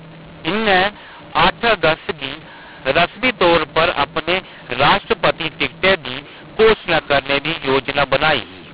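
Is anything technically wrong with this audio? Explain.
Yes. A mu-law and A-law mix-up runs through the whole clip. The speech was coded with A-law and decoded as mu-law, so sample levels are scrambled: some too loud, some too soft, and near-silent samples lifted well up. The speech sounds harsh and distorted, and the pauses fill with noise. Underneath, the telephone band stops at 4 kHz, which fits 8,000-sample-a-second G.711 coding.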